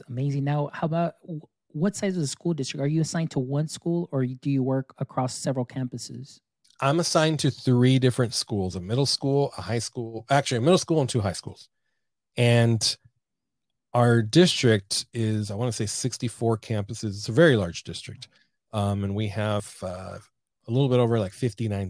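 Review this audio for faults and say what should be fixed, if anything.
Nothing to fix: no faults found in the speech recording, so no correction or preventive change is needed.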